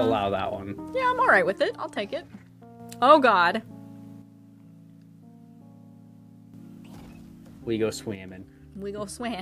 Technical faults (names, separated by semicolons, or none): one channel drops out